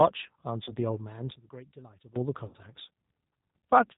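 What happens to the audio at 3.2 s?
At 3.2 s the speech carries the G.729 codec damage heard throughout. Rebuilt every 10 ms from a vocal tract filter, pitch predictor and sparse pulses, it loses everything above 4 kHz and sounds rough and synthetic, fitting 8 kbit/s. A plain low-pass would only dull the speech, without this buzz.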